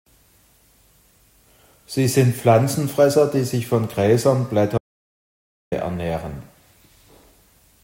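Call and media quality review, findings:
Audio dropout to silence, 4.78 to 5.72 s: speech cuts mid-flow to silence for about 0.94 s, then resumes abruptly. No room tone or concealment fill, unlike packet-loss gaps. Likely input link or device loss, encoder writing silence.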